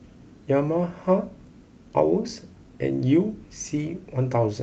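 No technical faults can be heard in this speech, which carries the ordinary character of a call codec path with its top end rolled off around 8 kHz.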